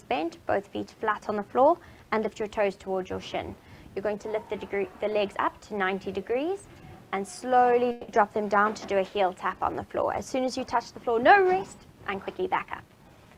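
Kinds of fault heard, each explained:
Call audio freeze: At about 7.91 s the sound stalls for roughly 0.19 s. For 170 ms the receiver stretches the last sound into a fading buzz, with no stretch of true silence. When the flow resumes, playback picks up exactly where it stopped. Nothing is lost, but everything after runs 170 ms later. A delay in arriving packets, draining the jitter buffer, is the likely cause.
Jitter buffer speed-up: From 12.26 s to 13.37 s the sound runs faster, at about 112 percent of normal speed, while the pitch stays the same. The receiver trims many tiny slices, each a pitch period or a few long, one after another. Together they remove roughly 150 ms. This sheds the extra delay built up in the buffer. The passage comes across as hurried.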